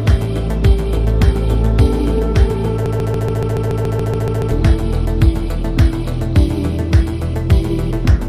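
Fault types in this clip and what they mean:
Broken-record loop: A 0.14 s piece repeats 12 times back to back, 2.86 to 4.51 s. Likely a stalled player, encoder or stream. The missing audio is lost.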